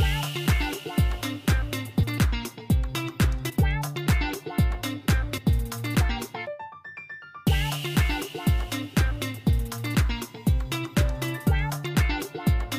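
Around 2.02 to 2.04 s, then 3.49 to 3.51 s and 5.37 to 5.39 s, you get compressed frames skipped. Whole chunks of the encoded stream never play, so the audio lurches ahead, roughly 300 ms at the first jump and about 100 ms at the other two. That fits frames of about 23.2 ms.

From 9.87 to 11.87 s there's USB whine, a steady 1 kHz tone sitting about 35 dB under the signal. That's the bus's 1 ms frame timing leaking into the audio through power or ground, heard as a thin, fixed-pitch whine.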